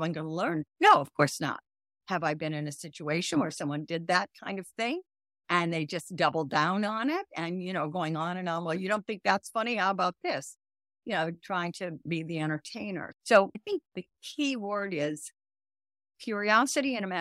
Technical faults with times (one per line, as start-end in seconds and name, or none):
none